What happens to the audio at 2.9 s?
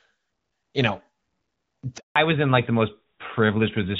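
At 2.9 s the speech sounds duller and rougher than before, with the airy top end missing: nothing remains above 4 kHz. This is a fallback to narrowband, running from 2.16 s to the end of the clip. The call drops out of the wideband HD Voice codec into an older narrowband one, which fits a switch from AMR-WB to AMR-NB at around 12.2 kbit/s. The narrower coded band cuts away the upper frequencies.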